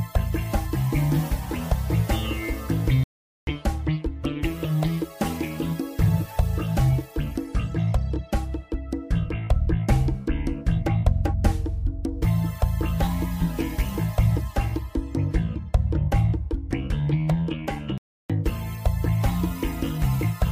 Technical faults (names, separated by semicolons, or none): playback stall